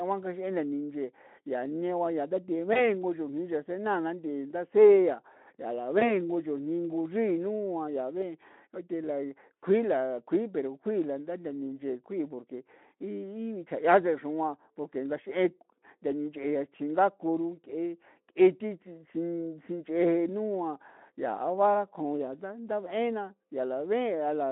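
Speech carried over a narrowband Speex line has VoIP packet loss concealed by the speech codec at 2.73 s and again at 6.0 s, between "nthii ndasi'a yaa la" and "nin'go nchrii nua yaa". Each time, about 20 ms of sound goes missing, which fits one dropped packet. The decoder bridges it by extending its last pitch and filter, smearing the sound into a brief buzzy tone or coloured noise. Unlike a plain dropout, there is no silent hole. The weakened, distorted sound persists until about 2.9 s and 6.21 s while the decoder recovers.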